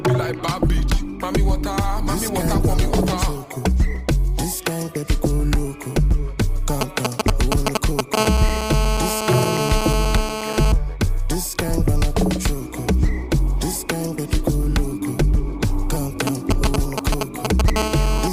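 The audio begins thin and dull. This is an adaptive stream starting at a low bitrate. From 0.0 to 4.0 s the treble is missing or sounds synthetic, and codec artefacts are stronger. The sound points to an Opus stream at about 24 kbit/s. At 4.0 s quality jumps abruptly to something consistent with about 64 kbit/s, with no gap. The player opened on a cheap version to start fast, then switched up once it had judged the connection. From 6.81 to 8.16 s come GSM signalling bursts. They form a galloping dit-dit-dit of short buzzes at 217 Hz. They are a little louder than the audio itself. A nearby 2G phone is exchanging brief radio bursts, and the audio circuit rectifies them into sound. The same bursts return from 16.27 to 17.70 s, here at roughly the same level as the audio. Each signalling episode runs straight into GSM phone buzz, once the phone settles into a call. From 8.17 to 10.72 s a hard, raspy 217 Hz buzz with dense harmonics runs steadily, about 4 dB below the audio. 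It sits there regardless of what the audio does. It recurs from 17.76 to 18.28 s, about 5 dB below the audio. The phone transmits 217 bursts a second, and the rectified pulses become that buzz.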